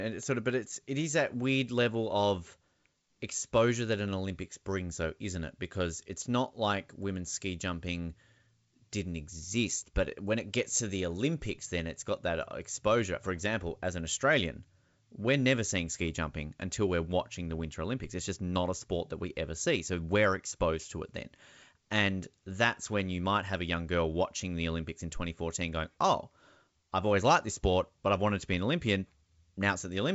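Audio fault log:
No faults heard.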